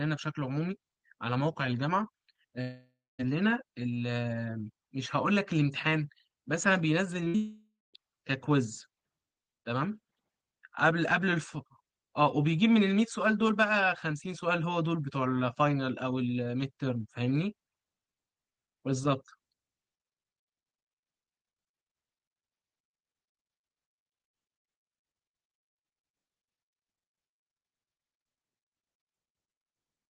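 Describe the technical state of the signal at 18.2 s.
At 18.2 s the signal is intact, with no dropout, glitch or distortion. The speech passes cleanly through the call path's codec, and the band tops out at about 12 kHz.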